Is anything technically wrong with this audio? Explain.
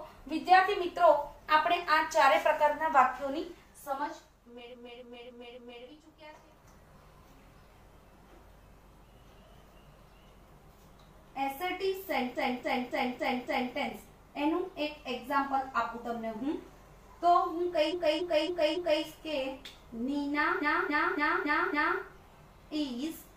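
Yes. Repeated frames occur at 4.69–5.81 s, 12.31–13.70 s, 17.88–19.00 s and 20.58–21.97 s. A 0.28 s block of compressed audio replays four or five extra times. The restarts produce a stutter.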